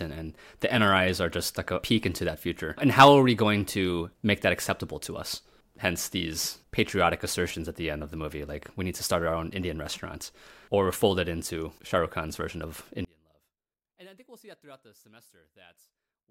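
At 13.05 s the speech suddenly collapses to a faint trace about 32 dB down and stays there until the end at 16.31 s. That's the classic sign of one channel inverted, likely: opposite-polarity left and right cancelling when summed to mono.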